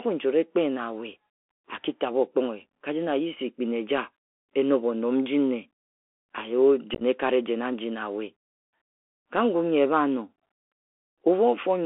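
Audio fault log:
throughout: Bluetooth CVSD headset codec, one-bit delta coding squeezing sound into 250 Hz to 3.4 kHz; unlike simple band-limiting, loud highs overload into scratchy sibilance over granular hiss.
6.94–7.02 s: unconcealed Bluetooth headset packet loss, about 45 ms missing across 67.5 ms, longest gap 15 ms; abrupt holes, not smeared or repeated, so it sounds chopped and crackly.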